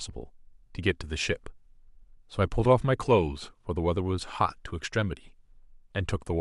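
No technical faults are audible.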